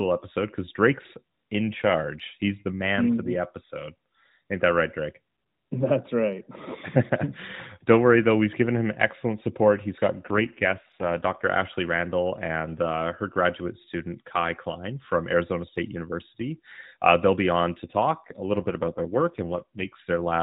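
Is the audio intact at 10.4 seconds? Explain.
No. From 10.28 to 11.48 s the speech turns rougher and more synthetic, with no gap and no loss of band. This is an AMR rate drop: the codec falls back to fewer bits per frame, which fits a switch from 12.2 to 5.9 kbps.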